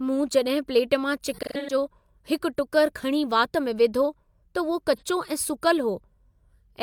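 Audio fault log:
1.32–1.74 s and 4.96 s: AAC frame loss with concealment. Dropped frames, about 256 ms scattered and the longest run roughly 150 ms, then 43 ms, are patched from the previous spectrum, giving smeared, phasey noise that shows as blurred, streaky spectral patches.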